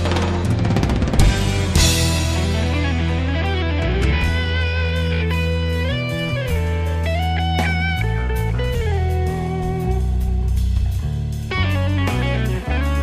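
A phantom power thump at 1.19 to 1.27 s: a supply switched on or off on a live input sends a step through the coupling capacitors, giving a deep thump peaking near -4 dBFS.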